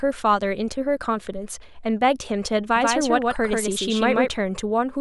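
From 2.76 to 4.28 s, a slower second path likely recaptured the speech, producing a doubled audio track: an abrupt copy about 150 ms behind, somewhat quieter.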